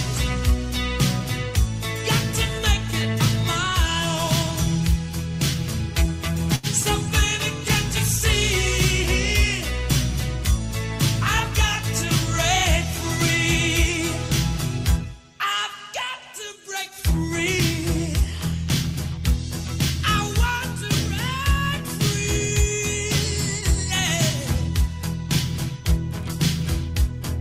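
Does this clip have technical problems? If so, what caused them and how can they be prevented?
Yes. At 6.55 to 6.66 s one sound hangs on unnaturally, stretched with a faint buzzy, slightly dipped quality before the audio picks up exactly where it left off. This is a short stall from a late packet: the packet due at that moment arrived late, the jitter buffer ran dry, and the receiver extended the last sound for about 78 ms until it came in. Nothing is lost, but timing slips by that amount. A larger or adaptive jitter buffer and a steadier network path would prevent it.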